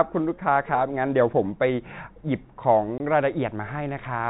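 At 2.98 to 3.00 s, packet loss filled with silence cuts a 20 ms hole in the speech, consistent with one lost 20 ms packet. The hole has hard edges.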